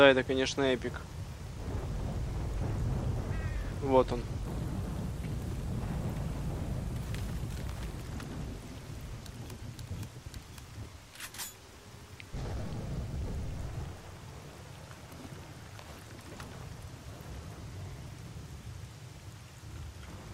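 From 4.45 s to 8.01 s there's a section at the wrong speed: that stretch runs at 1.32 times its proper rate, so everything jumps up about five semitones and feels hurried, then drops back to normal at 8.01 s. Because pitch and tempo shift together and switch abruptly at both edges, it's likely a playback or edit step that ran this part against the wrong clock rather than anything in the original recording.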